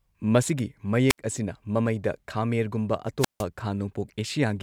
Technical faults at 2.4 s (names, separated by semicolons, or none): none